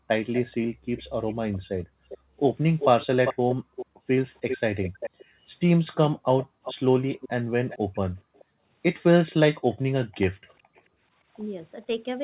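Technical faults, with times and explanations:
0.00–1.18, 2.18–2.37, 3.55–4.08, 5.17–5.39, 6.46–8.64 and 10.37–11.27 s, background gated by the echo canceller: the room sound drops by about 40 dB. The dips last from a fraction of a second to about a second. The canceller clamps the microphone while the far end plays, then releases it.
0.33–9.32 s and 10.48–10.80 s, echo leak: a delayed copy of the speech trails the original. In the first span it lags by 395 ms and sits about 10 dB below the speech. In the second it lags by 433 ms and is very faint, about 40 dB down. The likely cause is loudspeaker sound reaching a microphone whose echo canceller did not fully remove it.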